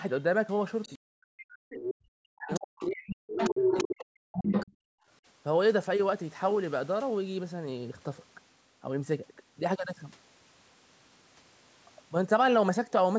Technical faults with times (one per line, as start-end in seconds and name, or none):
0.83-0.97 other side's voice leaking through
0.98-4.68 speech suppressed in double talk
1.74-1.93 other side's voice leaking through
2.48-2.85 other side's voice leaking through
3.33-3.87 other side's voice leaking through
4.33-4.66 other side's voice leaking through
4.85-5.07 background gated by the echo canceller